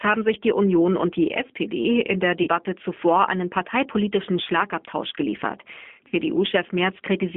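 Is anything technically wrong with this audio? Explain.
Yes, a couple of things. The whole clip has gone through the G.729 codec at 8 kbit/s, and the damage is plainly audible. It rebuilds speech from a vocal tract model plus a few pulses per frame, and the line only carries about 200 Hz to 3.5 kHz, so it sounds muffled, rough and a bit synthetic.

There's also VoIP packet loss concealed by the speech codec, at 2.43 to 2.49 s (right after "in der", before "zuvor einen parteipolitischen") and again at 6.08 to 6.14 s. Each gap is 40 ms, which fits two lost 20 ms packets. The decoder stretches the last pitch and filter with fading gain, so you get a brief buzzy or noisy smear, and the speech stays weak or distorted just after it.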